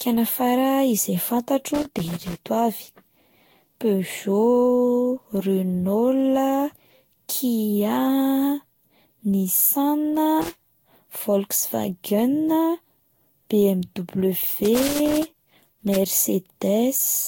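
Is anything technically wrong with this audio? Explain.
Yes, there are two faults. Throughout the speech, generation loss is audible: the sound is swirly, smeared and hollow, with blurred consonant attacks and nothing above 16.6 kHz. The likely cause is repeated lossy re-encoding, around seven passes at roughly 64 kbit/s. Each pass requantises on a shifted frame grid, so the artefacts build up. That is why it sounds worse than a single encode at that bitrate would.

Loose connector crackle occurs at 1.74–2.41 s, 10.42–10.62 s and 14.47–15.97 s. A poor contact rapidly breaks and remakes the signal path, which chops the audio, and any DC on the line adds pops. Unlike regular digital clicks or dropouts, these are irregular, scratchy bursts.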